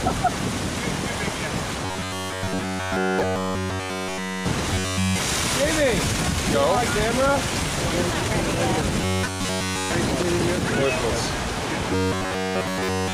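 A rigid, metallic buzz locked at about 94 Hz is heard from 1.86 to 4.49 s, 4.74 to 5.19 s, 9.01 to 9.93 s and 11.93 s to the end. This is robotic sound from repeated short buffers, likely caused by input arriving too slowly, so a fragment of roughly 10.7 ms is looped over essentially the whole of each stretch while the real audio is skipped. Separately, brief glitches at 3.79 s and 11.73 s are damaged data in a compressed stream, where corrupted frames make the decoder misread its input and lose sync before it locks onto the next valid frame.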